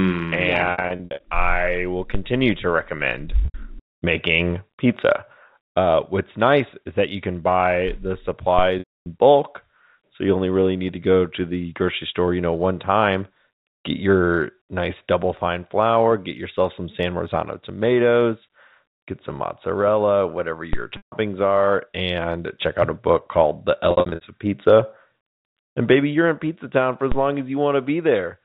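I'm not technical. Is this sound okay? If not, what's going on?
No. Two kinds of fault can be heard.

Packet loss with pitch repetition at 0.72 to 1.20 s, 3.45 to 3.54 s, 8.79 to 9.06 s, 20.97 to 21.12 s and 23.91 to 24.21 s. Small pieces of the speech went missing in transit, and the receiver filled each gap by repeating the last bit of voice, so those moments sound briefly held, buzzy or smeared.

DC step at 2.15 s, 8.59 s, 20.73 s and 27.12 s. At each of these moments the resting level of the signal suddenly jumps and then quickly eases back. You hear a short, low thump or click, while the speech itself carries on unchanged.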